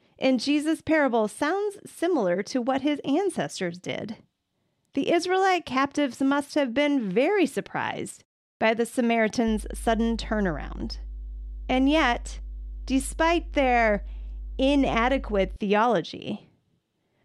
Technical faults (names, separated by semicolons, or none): mains hum